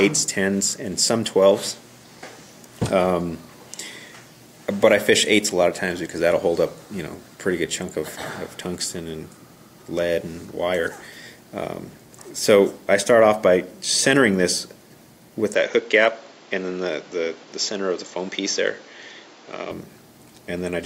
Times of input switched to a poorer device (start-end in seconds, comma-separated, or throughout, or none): 15.55-19.71